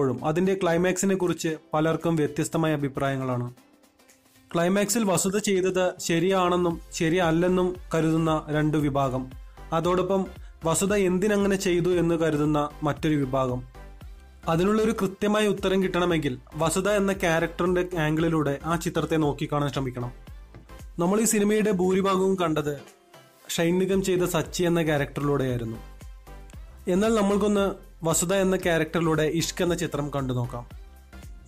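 Nothing in the audio stood out as a technical problem on listening.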